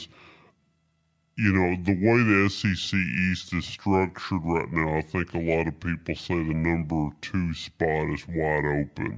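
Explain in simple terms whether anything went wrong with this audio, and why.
A wrong sample rate affects the whole clip: the speech plays at two-thirds speed, which fits audio recorded at 24 kHz being played at 16 kHz. Voices therefore sound slow and seven semitones deeper.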